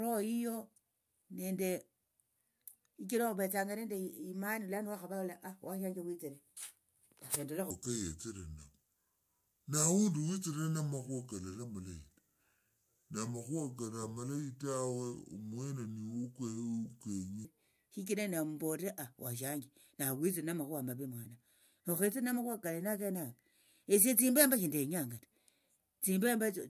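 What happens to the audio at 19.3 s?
Nothing goes wrong at 19.3 s: the speech passes through that moment intact, with no dropout, click, distortion or other audible fault.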